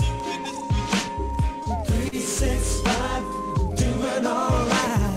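Short stalls from late packets occur at 1.63 to 1.69 s and 2.08 to 2.15 s. Each time a packet arrived late, the jitter buffer emptied, and the receiver stretched the last sound by 26 ms, then 42 ms, before resuming. Nothing is lost, but the sound briefly hangs with a faint buzz or dip.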